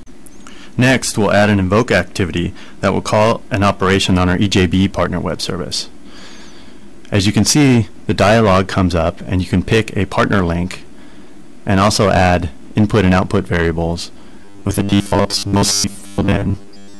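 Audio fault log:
14.45 to 17.0 s, robotic sound from repeated short buffers: the final stretch takes on a rigid, metallic buzz fixed at 100 Hz that roughly tracks the underlying sound while losing its natural contour. Most of the time in this section is filled by repeated material rather than new audio. The likely cause is input arriving too slowly, with the playback path repeating the last 10 ms block, whose length sets the 100 Hz buzz.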